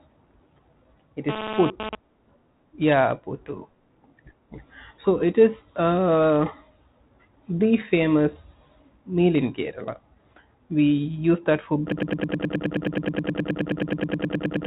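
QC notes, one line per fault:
1.29–1.95 s, GSM phone buzz: a nearby 2G phone's radio bursts, arriving 217 times a second during a data transfer, were rectified in the audio circuitry. This adds a hard, raspy 217 Hz buzz with many harmonics, about 7 dB below the speech, unrelated to it.
11.92–14.67 s, broken-record loop: the playback or stream likely stalled and kept resending its last held fragment. A 0.11 s slice repeats exactly, back to back, 26 times to the clip's end, and the speech that should have followed is lost.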